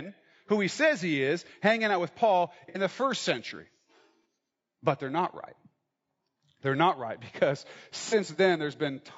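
Throughout, the speech sounds rough and grainy, with noise between the harmonics and a thin, synthetic top band, likely from low-delay AAC compression (AAC-ELD) at a low bitrate near 32 kbps. At 2.69–2.78 s, 4.23–4.25 s and 8.09–8.14 s, AAC frame loss with concealment produces short smeared, noisy patches where the decoder fills the gap from the last good spectrum. The first gap runs longer, consistent with two consecutive lost frames.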